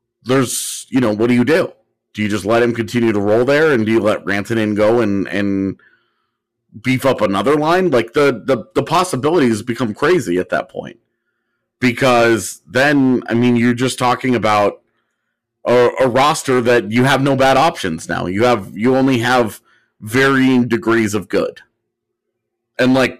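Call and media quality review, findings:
Crackly fuzz on louder speech peaks, whole clip: hard clipping. Signal driven about 12 dB beyond what a converter, number format or gain stage can pass; around 7 percent of samples flattened, flat tops adding high harmonics.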